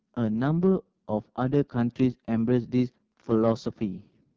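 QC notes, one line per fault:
Throughout, AMR wideband (HD Voice) codec: the speech comes across rough and raspy, with a buzzy, gritty edge and a hissy top band that's just shaped noise filling in above 6.4 kHz. Damage this heavy fits the codec's lowest 6.6 kbit/s mode.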